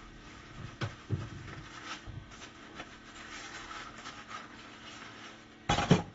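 From start to end the sound is dull and smeared, with a warbling, fizzy texture and nothing above 7.6 kHz, likely from AAC compression at a low bitrate, around 24 kbps. A spectrogram shows a hard ceiling.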